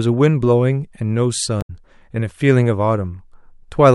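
At 1.58 to 1.70 s, damaged data in the compressed stream corrupts a stretch of frames; the decoder misreads them, loses sync and hunts for the next valid frame header. The speech is briefly disrupted for about 0.12 s, then resumes.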